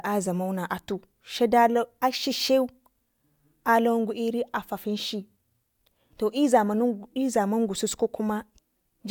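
Nothing in this speech recording registers as a technical fault.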